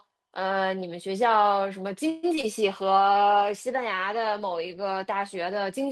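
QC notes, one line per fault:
2.09 to 2.25 s, call audio freeze: the speech stalls for about 136 ms while the last sound is stretched out as a fading buzz, with no silence and nothing lost. Likely packets held up in transit draining the jitter buffer, after which the audio picks up where it left off.
2.35 to 2.39 s and 2.41 to 2.45 s, short concealed packet loss: two back-to-back blips of about 20 ms each, heard as a quick smear or wobble. The decoder missed those bits and patched each hole by extending the previous sound before blending back in.
2.62 s to the end, call bitrate drop: from here the speech turns rougher and more muffled, with the top end dulled. The encoder fell from 40 to 18 kbps, sitting at the bottom for about 2.35 s, so it codes coarser and trims the highs.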